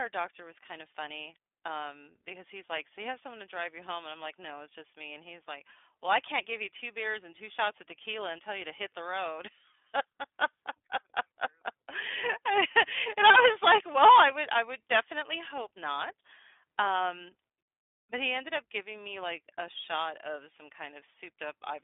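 From start to finish the speech sounds thin, boxed-in and slightly rough and synthetic, with plainly audible coding damage. It is the work of the iLBC codec, a narrowband VoIP coder that codes each 20 ms frame's excitation on its own, without drawing on the previous frame, a coarseness that fits its 15.2 kbps mode. The line band runs from about 200 Hz to 3.5 kHz, and nothing survives above 3.7 kHz.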